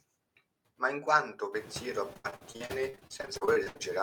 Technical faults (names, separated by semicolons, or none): noise suppressor artifacts; repeated packet loss (robotic sound)